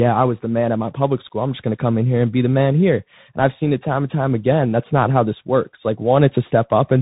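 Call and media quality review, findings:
Bluetooth CVSD headset codec, throughout speech. Band stops near 3.8 kHz; s sounds scratchy, granular hiss under speech, loud high content distorting. Probable component: headset link on a 64 kbps CVSD path. One-bit up/down coding with adaptive step can't track fast transients.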